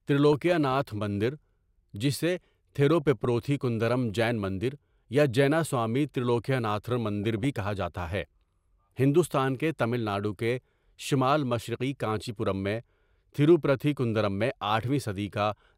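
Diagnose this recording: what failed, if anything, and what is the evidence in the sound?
DAB burbling at the broadcast codec stage: short blips of noise at 0.32–0.76 s, 2.82–3.25 s before "کندرم جین مندر یا", 7.24–7.44 s and 12.18–12.29 s. Uncorrected bit errors corrupt MP2 audio samples, so single sub-bands get short noise blips, unlike packet-loss dropouts that gap everything.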